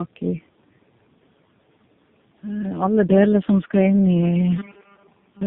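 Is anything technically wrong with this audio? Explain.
Yes, there are two faults. Tandem speech coding runs throughout: the speech passed through two low-rate speech codecs in turn, each coding the last one's output. It sounds rough and muffled, with nothing above 3.7 kHz.

From 4.58 s to the end, there is robotic sound from repeated short buffers. It is a rigid, metallic 200 Hz buzz, likely from 5 ms chunks repeated while most of the real audio is skipped.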